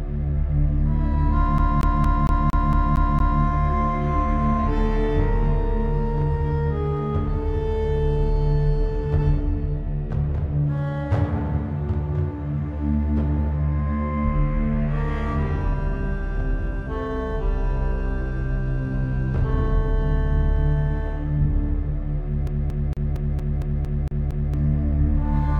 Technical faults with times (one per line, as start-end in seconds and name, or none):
1.58-3.42 CD stuck on one turn
22.47-24.54 CD stuck on one turn